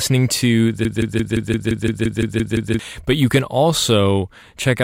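From 0.85 to 2.79 s a broken-record loop repeats one 172 ms fragment eleven times, likely a stalled stream resending its last buffer while the intended audio is lost.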